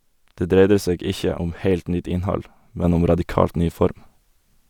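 A speech clip with a sudden gain jump at 2.84 s: speech and background noise step up together by about 4 dB and stay there, likely a gain change applied with no ramp.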